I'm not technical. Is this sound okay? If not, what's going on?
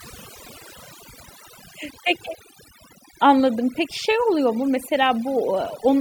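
No. Overdone noise removal runs throughout the clip. A noise-cleaning tool was set too strong, so it shuts off bits of sound it mistakes for hiss, including quieter parts of the speech, leaving the background broken into twinkling, warbling specks.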